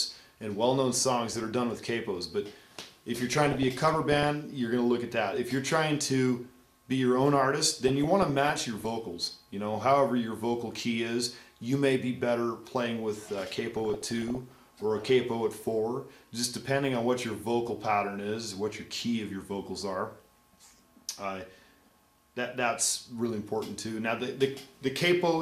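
DAB burbling is heard in four bursts: 1.31–1.54 s, 3.30–4.29 s, 7.88–8.88 s and 13.76–14.60 s. Weak reception lets bit errors slip past error correction, at a bit error rate of roughly half a percent (less in the third burst). Corrupted MP2 scale factors make single sub-bands jump in level for up to a frame.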